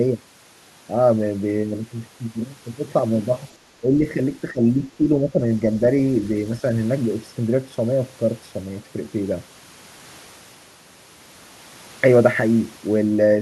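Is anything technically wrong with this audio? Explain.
Yes. Between 3.81 and 4.04 s, 4.52 and 4.63 s, and 4.89 and 5.62 s, the speech ducks and thins in short pieces, up to about 10 dB down. This is likely speech suppressed in double talk: with both ends talking at once, the echo canceller couldn't tell the near talker from loudspeaker echo and attenuated both. The effect is patchy, so most of each of the first two stretches sinks, and in the longest span a little over half its length.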